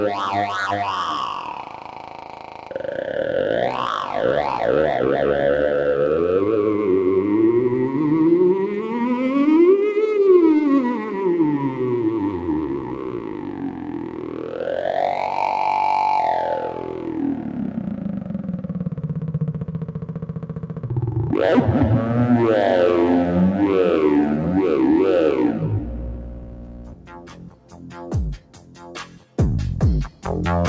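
Noise suppressor applied to music or sounds, throughout: a speech-tuned suppressor reads sustained tones and ambience as noise, so the level swings by around 10 dB as it clamps down and releases. Held material pumps and thins while sharp onsets pass, all through a call-codec band ending near 8 kHz.

Sound cut by the noise suppressor, at 1.44–2.78 s, 10.98–11.19 s, 12.3–14.65 s, 16.66–18.3 s, 19.59–20.89 s, 26.15–27.9 s, 28.38–29.38 s and 30.09–30.25 s: here the suppressor pulls steady or decaying sound down by up to about 8 dB (about 5 dB at 10.98 s), so the sound sinks and its tails are cut short.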